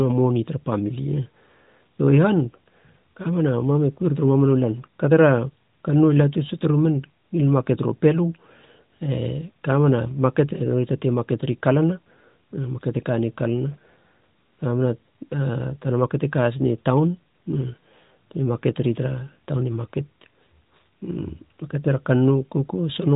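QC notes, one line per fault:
No faults found in this clip.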